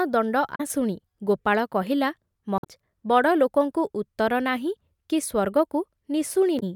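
Damaged data in a compressed stream breaks the speech at 0.54 to 0.61 s, 2.58 to 2.66 s and 6.59 to 6.63 s. Each time the decoder misreads corrupted frames and loses sync. It hunts for the next frame header. A brief chirp, squawk, click or short hole results.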